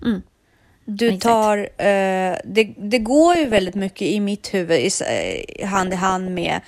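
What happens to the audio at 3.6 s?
At 3.6 s the speech is in the middle of DAB burbling, which runs from 3.35 to 3.92 s. Weak reception let bit errors, at a rate of a fraction of a percent, slip past error correction into the MP2 audio data. Corrupted samples put short blips of noise in individual sub-bands, and corrupted scale factors, where they get through, make sub-bands jump in level for up to a frame, so for about half a second the speech is overlaid with burbling noise blips.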